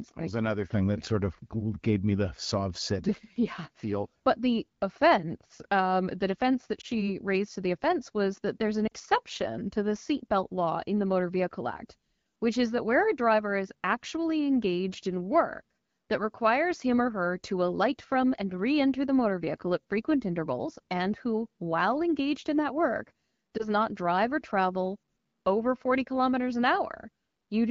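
At 6.81 s, after "offense um the defense", a lost AMR speech frame causes a brief dip or warble. The gap fits a single frame. The decoder bridges it by repeating the last good pitch and vocal tract settings at lower gain. At 8.88 s, after "was that there's an", a longer stretch drops to near silence, which fits about two frames. At 23.57 s, between "engaged in that work" and "not drive or travel", there is another brief dip or warble.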